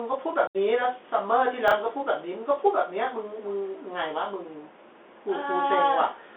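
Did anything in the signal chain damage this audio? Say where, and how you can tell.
Yes. Bluetooth CVSD headset codec, throughout: the codec stage confines speech to roughly 300 Hz to 3.5 kHz, and its one-bit 64 kbps delta steps leave scratchy sibilants and granular hiss.

Unconcealed Bluetooth headset packet loss, 0.47 to 0.56 s: on the wireless link, about 75 ms of speech drops to an abrupt-edged hole, which fits a run of lost few-millisecond packets.

Chunks out of order, 1.68 to 1.72 s: at the buffer stage, a 10 ms chunk plays three chunks late, producing a brief jumbled moment.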